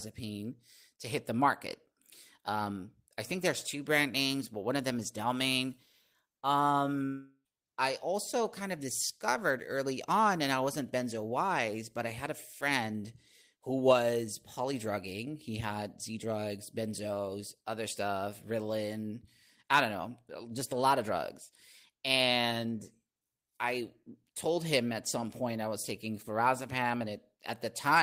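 At 7.05 s the speech breaks off until 7.47 s, just before "I also kind of". For about 394 ms the last sound is stretched into a fading buzz or hiss, followed by roughly 40 ms of silence. Speech then resumes with about 400 ms of material absent. This is likely a long network dropout, where no packets arrived and the receiver concealed the gap before resuming past the lost audio.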